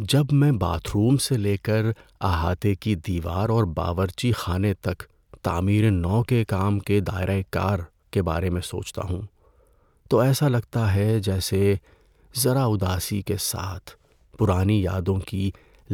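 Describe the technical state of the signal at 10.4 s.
At 10.4 s the speech signal is intact, with no audible technical fault at that point.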